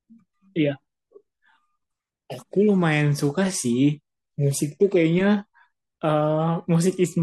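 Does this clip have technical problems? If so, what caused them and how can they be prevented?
No, there are no technical problems to hear in this speech clip. With nothing gone wrong, there is nothing here that needs preventing.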